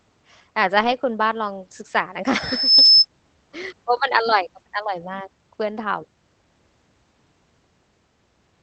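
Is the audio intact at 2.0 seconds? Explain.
No. From 1.99 to 2.01 s the speech turns briefly rougher and noisier: a lost packet was rebuilt from error correction, a low-bitrate copy carried in the next packet, filling the gap.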